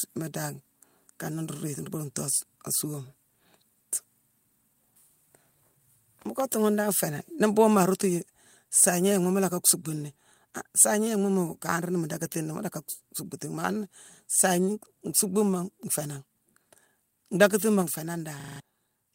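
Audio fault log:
7.83 s and 17.82 s, microphone volume stepped down: the speech and its background drop together by about 2 dB at 7.83 s and about 3 dB at 17.82 s, each in a single instant rather than a fade. The likely cause is the call software cutting the device's input gain after judging it too hot. On a waveform the envelope steps to a lower level with no ramp, and a spectrogram shows every band, noise floor included, darkening at once.
9.69 to 9.71 s and 10.80 to 10.84 s, microphone overload: the loudest peaks are pushed about 3 dB and about 4 dB past the converter's limit, giving brief harsh crackle on those moments. A few percent of samples are flattened in the first event and several percent in the second. The likely cause is input volume set too high, so the converter runs out of headroom. The waveform shows squared-off, flat-topped peaks, and the spectrogram shows vertical smears of broadband energy reaching high into the kHz range.
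18.4 to 18.6 s, system hang loop: just after "ndackatima nféé", one 40 ms slice of audio repeats exactly five times, so about 200 ms of real sound is replaced by a rapid stutter at 25 Hz. This happens when the computer or driver stalls while the sound hardware keeps cycling one ring buffer. On a waveform the identical 40 ms shape tiles across the gap, and a spectrogram shows the same pattern copied side by side in vertical stripes 40 ms apart.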